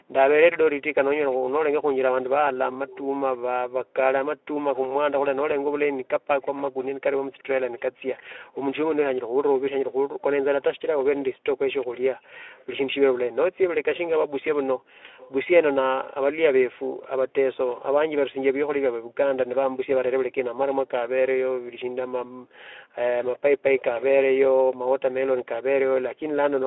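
From 1.31 to 25.48 s a faint delayed copy of the speech trails about 0.37 s behind, well below the main voice. This is likely an echo leak, where a loudspeaker's echo canceller let through sound its microphone picked up. At 10.07 to 10.22 s, and again at 22.25 to 22.53 s, the room background briefly drops away by about 31 dB and about 40 dB. This is background gated by the echo canceller, which clamped the microphone down while the loudspeaker was playing.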